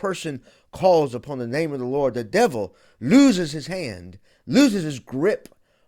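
A corrupt frame decoded from 1.12 to 1.18 s, just before "the name of the", leaves a brief blip in the speech. Bits inside a few consecutive compressed frames were damaged, yet the decoder still rendered them, misreading gains and spectral codes so that energy landed at the wrong frequencies. The result lasts roughly those frames' span, a short chirp-like burst sitting fairly low, peaking at about -35 dBFS.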